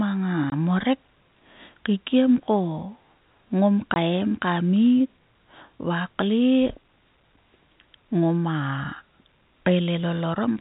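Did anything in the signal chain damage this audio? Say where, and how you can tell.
Yes, two kinds of damage are audible.

Network stage: packet loss filled with silence. The speech cuts to dead silence from 0.50 to 0.52 s and again from 3.94 to 3.96 s. Each hole is exactly 20 ms with hard edges, which fits a single lost 20 ms packet replaced by silence. A driver or buffer underrun would tend to leave irregular gap lengths or repeated fragments, whereas these are clean, identical packet-sized holes.

Acoustic stage, before capture: loudspeaker feedback squeal. From 0.91 to 3.31 s a single tone at 5.7 kHz rises out of the sound over roughly two seconds until it stands about 15 dB above the speech. A loudspeaker is being picked up by the microphone feeding it, and at that frequency the loop gain exceeds one, so the tone keeps reinforcing itself. Electrical interference would hold a steady level, but this tone swells on its own, which marks it as feedback. 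The telephone coding carrying the call shows no clear damage of its own.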